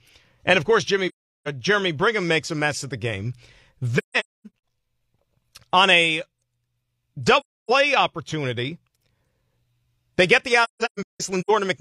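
AAC frame loss with muting: the decoder lost frames and zeroed their spectrum, so overlapping windows fade the speech out and back in. This leaves soft-edged silent holes at 1.08 to 1.48 s, 3.98 to 4.47 s (scattered dropouts), 7.40 to 7.70 s and 10.64 to 11.51 s (shorter scattered dropouts).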